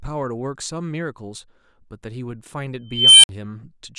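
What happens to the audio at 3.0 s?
An unstable filter runs from 2.88 to 3.29 s: a tone around 3 kHz swells over 0.35 s as the recursive filter's output grows without limit, clips, and then drops to 55 ms of silence. On a spectrogram it shows as a brightening horizontal band; the waveform balloons until it clips, then goes flat.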